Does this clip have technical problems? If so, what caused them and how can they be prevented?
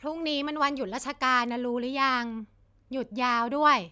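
No, this clip has no technical problems, so nothing needs preventing.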